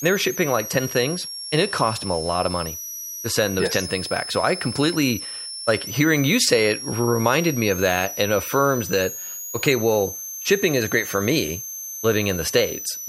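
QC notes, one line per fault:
Throughout: switching supply whistle, a high tone wandering between about 5.2 and 6.7 kHz, roughly 10 dB under the speech, from a power supply's converter running in an audible burst mode; unlike fixed mains hum or a steady tone, its pitch drifts.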